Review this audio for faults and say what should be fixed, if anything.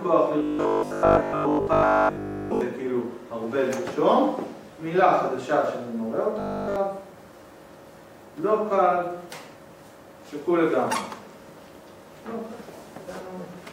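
Two stretches have robotic sound from repeated short buffers: 0.39 to 2.61 s, and a shorter one from 6.40 to 6.76 s. Both carry a rigid metallic buzz at 50 Hz, which fits the same 20 ms chunk being replayed over and over. The likely cause is fresh audio arriving too late, so the player loops the last chunk and skips real material. Most of the first stretch is repeated, and the second is entirely repeated. To prevent it, give the playback path a larger buffer or steadier delivery so it never runs dry.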